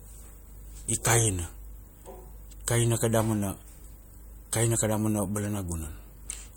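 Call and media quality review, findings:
Corrupt frame decoded at 6.30 s: bit errors in a couple of compressed frames, and the decoder played them rather than concealing them. Misread gains and codes push energy to the wrong frequencies, giving a short, loud glitch.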